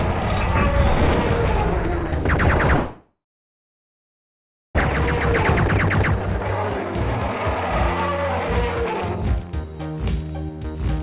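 From 2.76 to 4.83 s the sound trails off into a fading buzz, then about 1.6 s of near silence, and resumes with content skipped, a likely long network dropout. Unlike brief packet-loss glitches, the gap is long and the lost material never returns.

From 5.38 to 9.48 s a jitter buffer speed-up plays the audio about 8% fast, trimming roughly 0.3 s of pitch-period slices to shed the built-up delay. The pitch stays unchanged, which separates it from a resampling error. Through the band-limited call path nothing above 4 kHz is heard.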